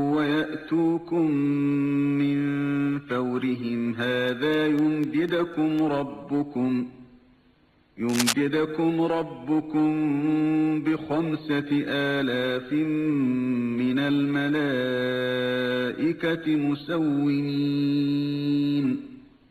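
Periodic USB or driver dropouts run from 4.04 to 5.79 s, repeating every 0.25 s, about seven in all. The USB bus or audio driver is blocked at that fixed interval, and each time a tiny sliver of audio drops to silence, heard as evenly spaced ticks.

Cable scratch noise appears from 8.09 to 8.34 s as a quarter-second burst of dense, uneven crackle, roughly as loud as the sound itself. The likely cause is a worn cable or connector being moved, so its contact resistance flickers and adds rustling noise.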